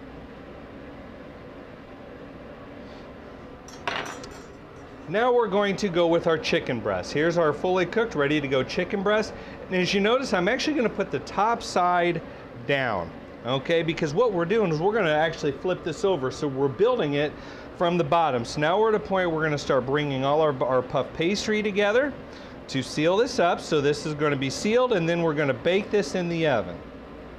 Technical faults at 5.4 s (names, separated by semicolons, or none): none